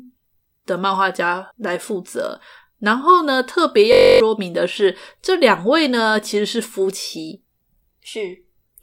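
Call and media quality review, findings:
System hang loop, 3.93–4.20 s: steady buzz at 46.9 Hz. One 21.33 ms fragment repeats, fitting a 1024-sample ring buffer replayed during a driver stall; roughly 0.3 s of speech is lost.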